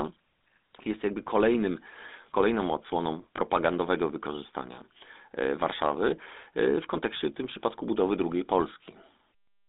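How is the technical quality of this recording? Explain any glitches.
The recording carries plainly audible codec damage throughout, plus one brief dropout.

GSM full-rate codec: Throughout, sound is confined to roughly 250 Hz to 3.7 kHz, which fits a 13 kbps GSM full-rate stream. Pulse-driven vocal-tract modelling with decimated excitation gives the speech a buzzy, gravelly roughness.

Lost GSM frames: From 3.36 to 3.39 s, just after "jakby kolejnym kolejną odsłoną", one 20 ms frame was lost. The decoder repeated the previous frame's settings, producing a short, rough, metallic ring.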